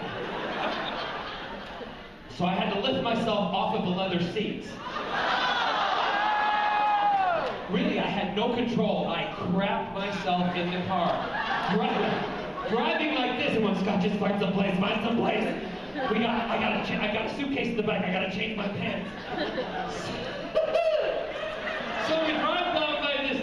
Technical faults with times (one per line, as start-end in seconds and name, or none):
none